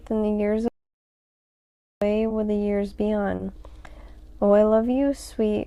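Right from the start there's clock drift between sender and receiver: the sending clock runs roughly two percent slow, so the jitter buffer keeps running short and the playback picks up small, unevenly spaced timing hiccups all the way through.

At 0.68 s the audio drops out to dead silence until 2.02 s. It's silent with no room tone, so about 1.3 s of material is simply gone. That's likely a lost input or link while the recorder kept writing silence.

Then come three short stalls from late packets, at 2.28–2.32 s, 3.36–3.41 s and 4.91–4.95 s. Each time the buffer ran dry and the last bit of sound was stretched, by 20, 30 and 20 ms. Nothing is missing, but you hear a brief held sound with a slight buzz or dip before things carry on.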